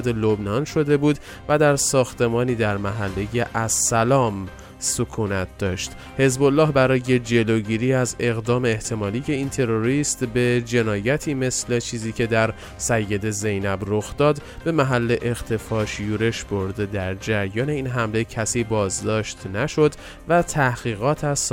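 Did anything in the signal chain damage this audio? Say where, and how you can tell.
Yes. The damage sits at the network stage, in a clock drift between sender and receiver: the sending device's audio clock runs about 3 percent slower than the receiver's. Audio arrives more slowly than it is played out, so the jitter buffer keeps draining. Across the whole clip the timing feels faintly unsettled, with small hiccups at uneven intervals rather than one clean break. That is the audible sign of two clocks that disagree.

The receiver's buffer logic answers with repeated timing corrections from 0.18 s to 21.53 s. Because the sender is slow, the receiver keeps repeating short pieces to fill the gap, always in the same direction. Together these stretch the audio to about 97 percent speed and add roughly 0.7 seconds by the end.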